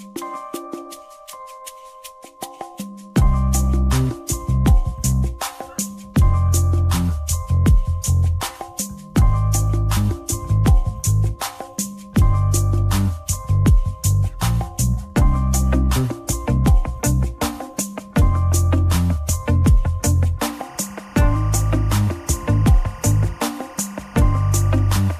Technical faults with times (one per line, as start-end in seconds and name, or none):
20.45-25.19 timecode bleed